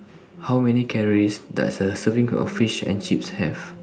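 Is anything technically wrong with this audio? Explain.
Yes. From 0.48 s to 3.13 s the level climbs steadily, a case of automatic gain rising. The automatic gain control judged the incoming speech too quiet and raised its gain gradually, by about 4 dB over those 2.65 seconds. Because the gain is applied to the whole signal, the background swells along with the voice, so the room tone and noise floor creep upward together rather than the speech alone getting louder.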